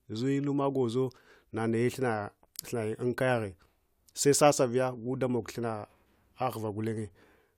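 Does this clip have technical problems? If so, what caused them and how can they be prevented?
No, there are no technical problems to report here.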